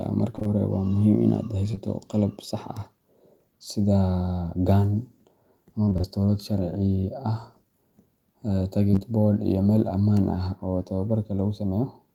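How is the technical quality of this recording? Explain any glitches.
The recording has packet loss in four places: three stretches of repeated loss and one pair of back-to-back short concealed losses.

Repeated packet loss (robotic sound) occurs at 0.35 to 0.47 s, 5.85 to 6.18 s and 8.91 to 9.03 s. In each stretch, audio arrived in bursts with holes between them, and roughly half of each span is synthetic fill. The holes are at most 28 ms long. The decoder extends the previous sound across each gap, so the speech turns choppy, with pieces missing.

Short concealed packet loss occurs at 1.71 to 1.75 s and again at 1.75 to 1.79 s. Each event drops about 20 ms of audio. The receiver patches it by continuing the preceding waveform, or by shaped noise where the sound was unvoiced, then crossfades back into real audio. Because the two events are adjacent, they form a single brief smear or wobble of about 80 ms, and a short consonant inside it may vanish.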